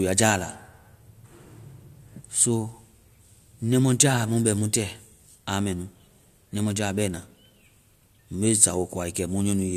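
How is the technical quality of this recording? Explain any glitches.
The recording has no audible technical glitches. There is nothing in the speech that calls for a fault explanation.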